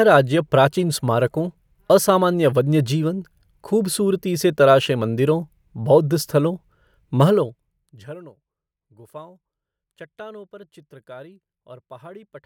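No technical faults can be heard anywhere in the speech.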